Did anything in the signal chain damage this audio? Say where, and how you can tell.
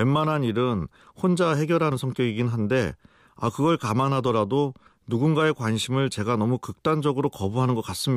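Yes: audio missing between chunks at 1.92 and 4.87 s. The speech jumps abruptly, losing roughly 50 ms each time, likely where a recorder buffer closes one 3-second chunk and opens the next.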